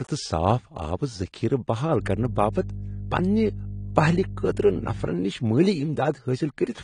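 AAC compression runs through the whole of this speech recording: the audio is dull and plainly damaged, with nothing above 10.1 kHz, the likely result of low-bitrate AAC-LC coding at around 32 kbps. At that rate the encoder quantises each block of frequency lines coarsely against a hearing model and lowers its cut-off, so the upper band is discarded and detail is smeared. Mains hum appears from 2.00 s to 5.08 s as a steady 50 Hz tone roughly 10 dB below the speech. It comes from the power line leaking into the signal path, through a ground loop or a nearby transformer.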